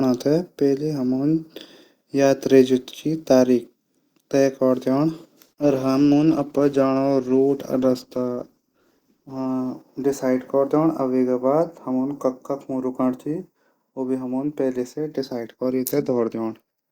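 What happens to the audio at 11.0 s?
Nothing goes wrong at 11.0 s: the speech carries on intact through that moment, with no dropout, click, distortion or other audible fault.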